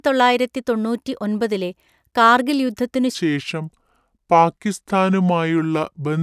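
After "കാർഗിൽ യുദ്ധത്തിനു", from 3.15 s to the end, the speech drops to about 0.73 times speed and about 5.5 semitones lower. This is a wrong sample rate fault, consistent with 44.1 kHz audio played at 32 kHz.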